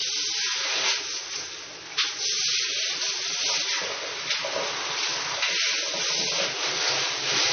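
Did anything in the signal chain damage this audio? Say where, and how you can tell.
Yes. The damage sits at the codec stage and runs through the whole clip. Nothing is present above about 6.3 kHz, so the top end is missing from start to finish. The file is a high-bitrate MP3, yet it sounds dull. That points to low-bitrate audio saved at a high bitrate. The cause is likely an earlier lossy encode, one that fits an AAC pass near 24 kbit/s. The later MP3 pass could not bring back what that first pass discarded.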